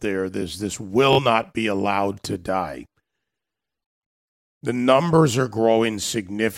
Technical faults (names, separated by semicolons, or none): Bluetooth stutter